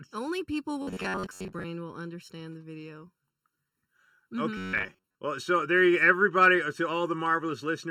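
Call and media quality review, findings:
Hollow, phasey speech throughout, fixed notches from around 700 Hz upward at even spacing. Channel delay (comb filtering): one channel late by under a millisecond, then summed to mono, cancelling shared content.

Rigid metallic buzz at 0.82–1.65 s and 4.57–5.15 s, pitched at 93.8 Hz. Robotic sound from repeated short buffers, likely underrun: a roughly 10.7 ms block looped, most real audio skipped.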